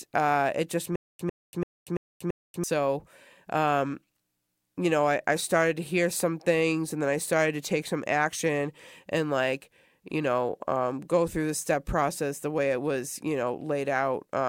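Speech with a stutter with silent gaps from 0.96 to 2.64 s, right after "uh it just": a 100 ms burst repeats five times every 337 ms, with 236 ms of digital silence between. The dead gaps between identical repeats set it apart from a seamless loop, pointing likely to a stalled stream.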